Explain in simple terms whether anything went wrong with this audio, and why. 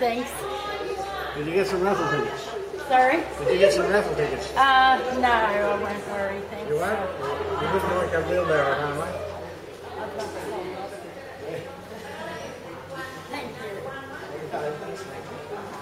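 Nothing went wrong here; there's no fault to hear.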